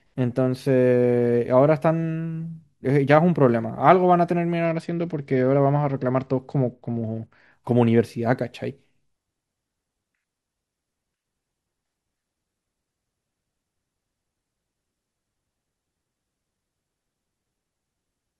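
Speech with a Bluetooth SBC bit pool drop from 4.65 to 7.52 s: treble dulls and gritty quantisation noise rises, which fits the bit pool falling from around 31 to 11, near 83 kbps. Unlike a switch to a narrowband call profile, full bandwidth returns once the link recovers.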